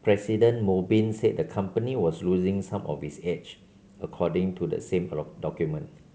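No technical faults can be heard in this speech clip. The G.722 wideband telephone coding at 64 kbit/s leaves at most a faint trace of its coding on the sound.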